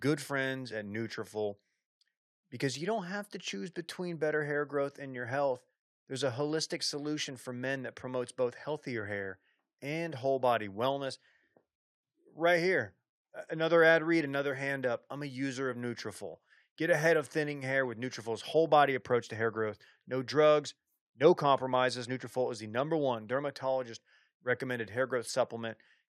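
Listening to the speech recording, nothing stood out as a technical problem at any point.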